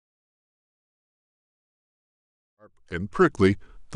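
From 2.75 s to 3.95 s the speech slows by about 5.6% and drops a full semitone: a drift correction step, likely from clock-matching software refilling its buffer.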